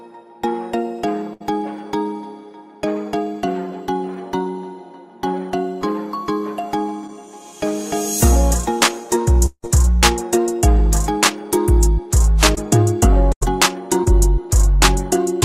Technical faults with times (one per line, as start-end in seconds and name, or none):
1.33-1.45 burst of packet loss
7.07-7.10 short concealed packet loss
9.46-9.69 long network dropout
12.55-12.58 short concealed packet loss
13.32-13.46 burst of packet loss
14.04-14.13 short concealed packet loss